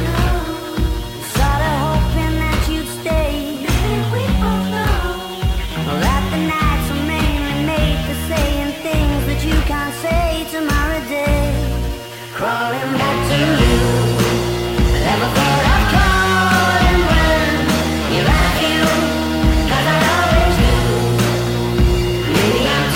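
Across the whole clip the sound carries grainy distortion that shifts with the signal, with quieter passages turning gritty and sputtering. Likely cause: low bit depth without dither, which fits about 6 bits rounded. Error sits roughly 25 dB below the signal, showing as stair-stepped waveforms and signal-tracking spectral haze.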